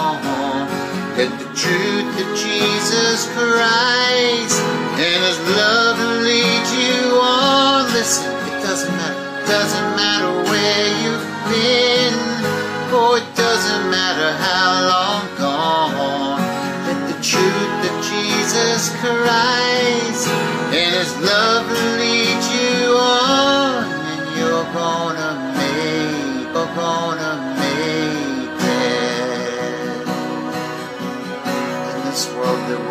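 From 26.54 to 28.56 s a stream segment repeated: two seconds, queued twice, replay after a small blip, far longer than a stutter.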